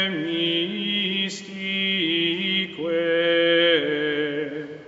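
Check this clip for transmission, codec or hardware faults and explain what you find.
Nothing in the clip points to a fault. The sound extends up to 8 kHz and no higher, as expected from the call microphone processing and WebRTC call path it passed through.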